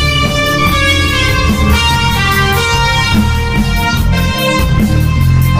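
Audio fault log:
No faults are heard anywhere in this audio. There is nothing to enter in the log.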